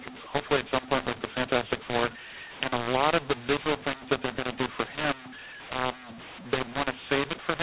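Throughout, the speech has a mu-law and A-law mix-up: A-law samples decoded as mu-law scramble levels, giving harsh distortion and noise in the pauses.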